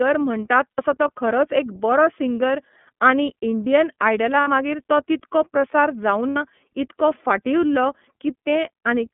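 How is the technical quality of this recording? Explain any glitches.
The quality is that of a narrowband phone call, with four brief dropouts.

The iLBC codec runs throughout. The speech sounds band-limited and slightly rough and synthetic because each 30 ms frame's excitation is coded separately. The line passes only about 150 Hz to 3.4 kHz. The artefacts are plainly audible and fit a 13.33 kbps mode.

Lost iLBC frames occur at 0.73–0.79, 4.41–4.48, 6.30–6.37 and 8.43–8.47 s. Each sounds like a short, held, buzzy vowel. The decoder repeats the last pitch cycle mixed with noise, consistent with two lost 30 ms frames in the first three gaps and one in the last. Clear speech returns almost immediately afterward.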